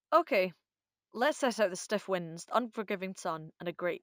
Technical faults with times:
0.00-4.02 imaging from linear upsampling

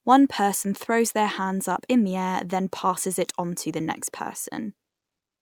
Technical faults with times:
none

